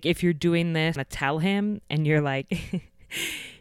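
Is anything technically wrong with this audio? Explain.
Yes. At 0.95 s, just after "if you're doing", there is a CD skip. The laser was knocked or tripped by a disc flaw onto another turn of the spiral track. The player muted for a few milliseconds and then resumed from a different point. It is heard as a short tick followed by an abrupt discontinuity in the speech, where the audio jumps forward or back by a whole number of disc revolutions rather than continuing smoothly.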